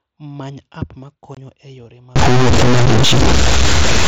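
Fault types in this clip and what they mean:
Unconcealed Bluetooth headset packet loss, 1.35 to 1.37 s and 2.86 s: between "app ma" and "e yore" the sound drops out for about 22.5 ms, which fits three lost mSBC packets, and later for 7.5 ms. Silence or an idle pattern fills each gap, with abrupt edges.
Stuck bit, 2.16 s to the end, after "e yore": the audio turns distorted, and noise fills the pauses. The likely cause is one data bit held at a fixed value, throwing roughly half the samples off by that bit's weight.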